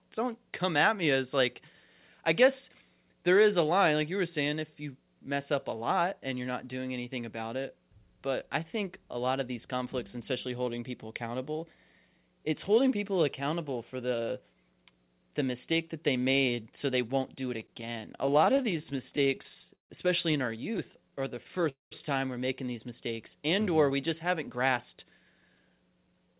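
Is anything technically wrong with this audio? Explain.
Yes, there are three kinds of network-delay problems, all in the last third of the clip.

Repeated stalls (stutter) show up twice. From 17.6 to 19.92 s, right after "they won't do it" and up to "especially in our", the jitter buffer keeps running dry because packets arrive late. The receiver patches each hole by stretching the last bit of sound, 34 times, adding about 479 ms, with the longest gap 146 ms. Nothing is lost, but the speech drags and hiccups. A milder run follows from 20.72 to 21.65 s: 12 tiny gaps of 12 ms at most, just a slight jitter.

A call audio freeze comes straight after, from 21.69 to 21.93 s, just before "time we're making these". The sound hangs, fades out and goes silent for about 160 ms, then picks up exactly where it stopped. That adds a 222 ms pause, likely from packets held up in transit.

A jitter buffer speed-up runs from 23.91 to 26.35 s. 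After those delays the buffer is holding too much audio, so the receiver trims out tiny pitch-period slices to catch up. That removes roughly a fifth of a second and pushes the pace to about 109% at unchanged pitch, so it sounds a bit rushed.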